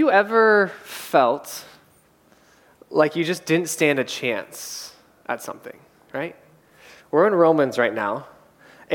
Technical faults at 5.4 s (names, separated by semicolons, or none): none